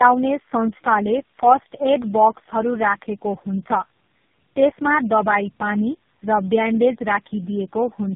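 Tandem speech coding runs through the whole clip. The speech seems to have crossed about four speech codecs in a row, each recoding the last one's damaged output. It sounds rough, muffled and warbly. Nothing reaches above 3.6 kHz.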